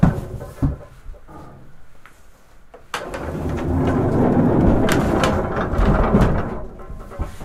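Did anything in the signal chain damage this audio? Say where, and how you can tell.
No, nothing in the signal chain audibly damaged this recording of sounds. Listening through, there is no point in the audio where any stage of the chain leaves a mark.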